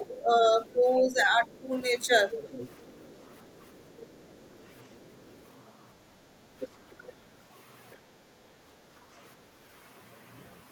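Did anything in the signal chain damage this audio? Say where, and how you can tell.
Yes. All three faults come from the call-processing stage, specifically the acoustic echo canceller.

Speech suppressed in double talk: from the start to 1.71 s, the speech dips and thins in patches that add up to roughly a second, at worst around 10 dB down. This coincides with the other side's voice being present. The likely cause is that the canceller could not tell the near talker from the loudspeaker echo during overlapping talk, so it attenuated both rather than risk passing echo.

Other side's voice leaking through: a second voice is audible under the speech at 0.67–0.83 s, 1.46–1.84 s, 2.31–5.41 s, 6.6–7.13 s and 7.91–7.96 s. It is barely there in the short scraps, louder through the long stretch at about 20 dB below the speech, and most prominent at 6.6–7.13 s, roughly 15 dB below the speech. The likely cause is residual echo: the far-end audio played from the loudspeaker reached the microphone and the canceller did not fully subtract it.

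Background gated by the echo canceller: the room tone briefly sinks at 5.93–6.04 s, about 5 dB, and at 8.74–8.86 s, about 6 dB. Each dip lasts around a tenth of a second, then the ambience returns. While the loudspeaker was active, the canceller's suppressor clamped the microphone gain, and it released once the far-end signal stopped.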